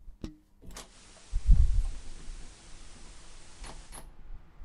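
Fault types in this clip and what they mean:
digital radio blending to analogue: at 0.84 s the receiver loses its digital stream and cross-fades over 125 ms to FM, returning at 3.98 s. Level shifts about 2 dB, and hiss about 25 dB below the signal arrives together, unlike a simple low-pass filter.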